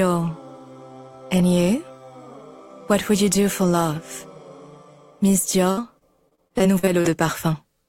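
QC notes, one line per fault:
5.71–7.07 s, repeated packet loss (robotic sound): choppy stretch where roughly ten short dropouts, none over 56 ms, are patched by extending the preceding sound.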